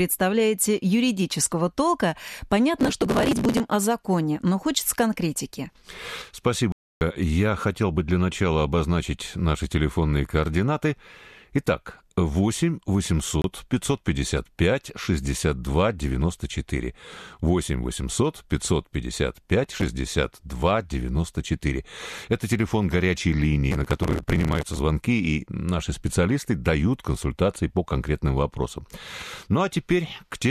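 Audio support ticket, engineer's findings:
Processor overload crackle, 2.80–3.60 s, 19.64–19.86 s, 23.71–24.77 s: gritty tearing over the speech from runs of skipped buffers only a millisecond or two long. Audio keeps flowing, unlike a mute.

Digital broadcast dropout, 6.72–7.02 s and 13.42–13.45 s: drops to silence on receiver frame loss, about 290 ms then 30 ms. No grit, and the missing audio is not recovered.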